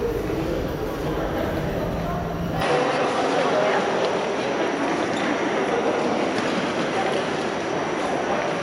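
At 2.61 s the input likely switched to a poorer device, with no gap at the changeover. From there to the end, nothing above about 11.1 kHz survives, so the sound turns duller, its level shifts by about 5 dB, and a faint new background noise appears.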